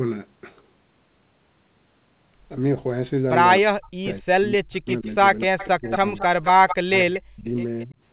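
Speech suppressed in double talk hits this speech clip from 3.6 to 6.04 s, again from 6.8 to 7.47 s, and briefly at 7.9 s. The talker's level dips and breaks into pieces, falling by about 40 dB at its deepest and losing roughly a second and a half of sound in the first stretch. The last dip is shallower, about 20 dB. The likely cause is an echo canceller that heard both sides at once, could not tell its own talker from the far end, and turned everything down. An echo leak overlaps this from 4.88 to 7.2 s. A copy of the voice trails 224 ms behind at about 10 dB below the speech, probably because a loudspeaker on one side fed its microphone and the canceller let part of that return. Throughout, nothing reaches above 4 kHz, which fits a G.711 mu-law call path.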